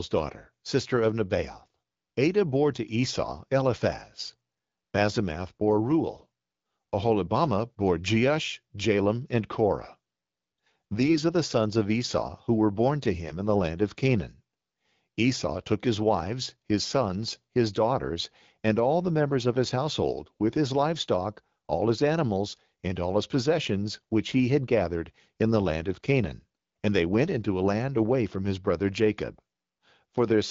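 From 10.99 to 11.18 s and 13.25 to 13.38 s, AMR bit errors scramble the excitation pulses, leaving the speech briefly hoarse and gargly, worse the second time.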